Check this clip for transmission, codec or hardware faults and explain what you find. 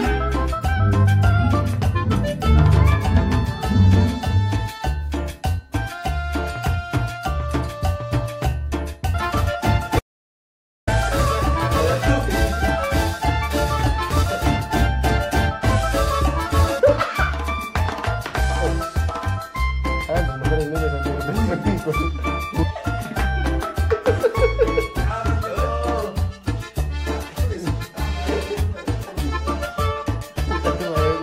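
One fault is present. An audio dropout to silence runs from 9.99 to 10.87 s. The sound cuts to silence for about 0.88 s, likely from lost input while recording continued.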